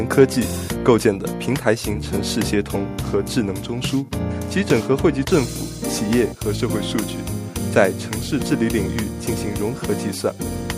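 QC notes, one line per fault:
No faults heard anywhere in this clip.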